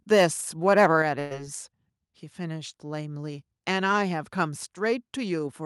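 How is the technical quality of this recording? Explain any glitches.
The recording has three clear technical problems in its first second and a half: distorted peaks, a sudden drop in level, and a short dropout with a smeared fill.

Microphone overload, 0.12 to 0.25 s and 0.68 to 0.86 s. The loudest speech peaks are flattened, most likely because the microphone input was set too high and drove the converter past its ceiling. The first burst overshoots by about 5 dB, the second by about 2 dB. Only a small share of samples are clipped, but it is enough to give those syllables a harsh, crackly edge.

Microphone volume stepped down, at 1.02 s. Just after those distorted peaks, the voice and the background both fall in level at once, by about 5 dB. This is likely the call software detecting an overloaded input and lowering the device's gain in a single step rather than a gradual ramp, so the drop is abrupt.

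Burst of packet loss, 1.19 to 1.33 s. About 120 ms of audio never arrived in time to be played. The receiver covered roughly 111 ms of it by stretching the last sound it had received and fading it out, so the speech smears into a held buzz or fading hiss. When normal playback returns, the speech picks up further along, with that stretch missing.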